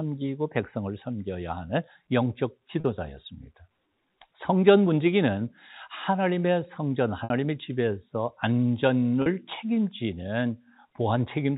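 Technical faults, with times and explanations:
2.80 s, 7.24 s and 9.22 s: packet loss with pitch repetition. Gaps of 40, 60 and 40 ms, consistent with dropped 20 ms packets, were bridged by repeating the last pitch period, which sounds like a brief buzzy held tone. A spectrogram shows frozen, flat harmonic lines, and the waveform shows one identical cycle repeating and tapering.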